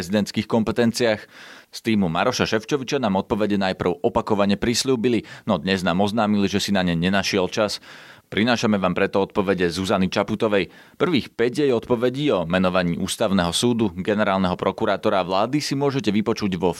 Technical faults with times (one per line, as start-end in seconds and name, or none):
11.70 dropped samples